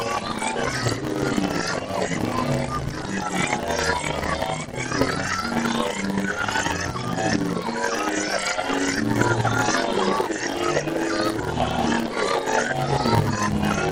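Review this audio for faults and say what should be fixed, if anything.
A block size mismatch (padded) runs through the whole clip. A steady buzz at 100 Hz sits over the everyday sounds, and everything plays at 0.919 times normal speed while keeping roughly its natural pitch. Each 10 ms block carries only about 92% real audio, and the remainder is filled with zeros. Those short silent gaps repeat at the block rate, which produces the buzz and stretches the timing. To prevent this, match the write block size of the producing stage to the read block size of the consuming stage, or add a proper buffer between them.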